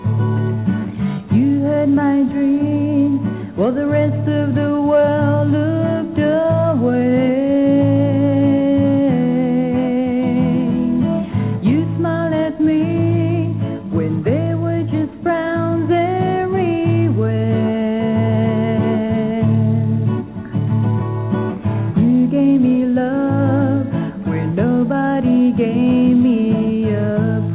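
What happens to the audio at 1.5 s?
Nothing goes wrong at 1.5 s: the sound carries on intact through the call path, whose G.711 coding keeps it band-limited to below 4 kHz as it is throughout.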